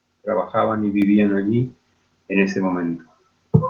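At 1.02 s the microphone volume stepped up in one go, so between "trabajaban y" and "allí en ese" speech and background together jump about 4 dB louder.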